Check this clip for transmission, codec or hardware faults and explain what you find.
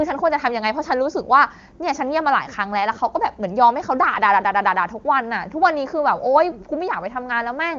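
The speech comes through the AMR wideband (HD Voice) codec with content stopping near 7.2 kHz and at most faint codec colouring, which fits its highest 23.85 kbit/s mode, and nothing amiss can be heard anywhere in the signal.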